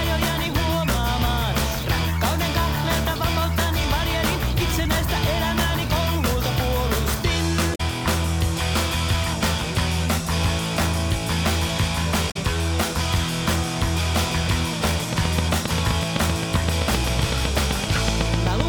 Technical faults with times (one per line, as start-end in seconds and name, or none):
7.72-7.80 damaged data in a compressed stream
12.28-12.37 damaged data in a compressed stream
15.13-18.61 train of clicks